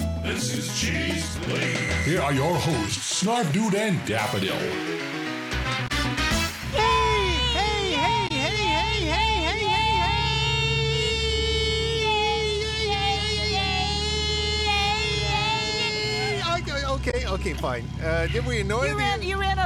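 Three brief bursts of damaged data in the compressed stream occur at 5.87–5.91 s, 8.27–8.31 s and 17.10–17.14 s, each about 40 ms of garbled sound as the decoder misreads corrupted frames, loses sync and resumes at the next valid frame header.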